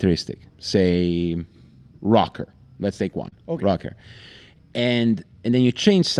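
At 1.31 s, 3.17 to 3.27 s and 4.78 s, the speech turns briefly rough and grainy. Each is a lost packet rebuilt from error correction: the decoder played a low-bitrate copy carried in the following packet, so no gap appears. The middle stretch of about 60 ms suggests three separate packets were lost. On a spectrogram these frames look coarser and noisier, while the waveform stays continuous.

Right after, from 3.29 to 3.34 s, comes short concealed packet loss. About 20 ms never arrived, and the receiver extended the preceding sound for roughly 22 ms before blending back into the real audio. It is heard as a brief smear or wobble. A spectrogram shows the preceding sound held, then merging back in.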